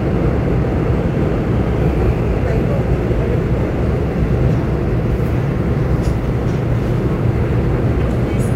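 From start to finish, crude rate conversion adds a gritty, inharmonic fizz that rises with loud and bright passages, about 40 dB below the sound. Samples were picked nearest-neighbour without filtering, consistent with a 48 kHz to 44.1 kHz change. Unlike steady hiss, it tracks the sound's level.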